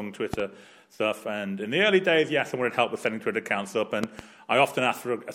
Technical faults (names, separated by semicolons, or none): loud pop